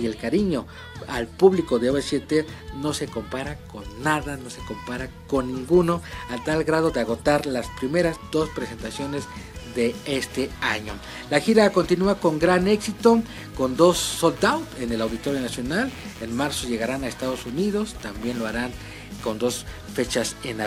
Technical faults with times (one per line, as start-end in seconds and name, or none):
14.09-19.32 computer activity noise